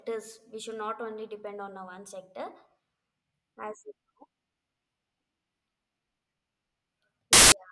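At 7.33 s the speech gives way to about 0.19 s of file tags played as audio, ending at 7.52 s. An embedded cover picture, stored as compressed image data, has been decoded as if it were samples, so its near-random bytes emerge as harsh, very loud white noise with abrupt edges. On the waveform this is a solid, dense block of high-level noise. The spectrogram shows a flat, bright band covering every frequency, sharply cut at both ends.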